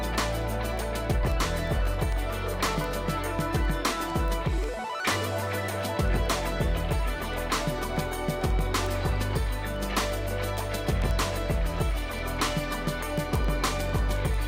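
From 0.15 s to 14.43 s, word clock ticks run through the audio at roughly ten per second, about 150 in all. The receiving device is free-running rather than locked to the incoming digital stream. Its clock differs from the sender's by something like 200 parts per million, so the clocks slip past each other about every tenth of a second. At each slip a single sample is dropped or repeated. On a waveform each shows as a one-sample step. On a spectrogram it is a thin full-height vertical line, and the lines form an evenly spaced comb.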